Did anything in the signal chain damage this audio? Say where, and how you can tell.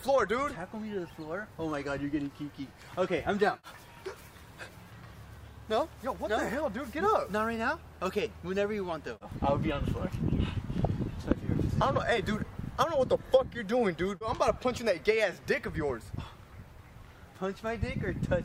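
No, nothing in the chain damaged this audio.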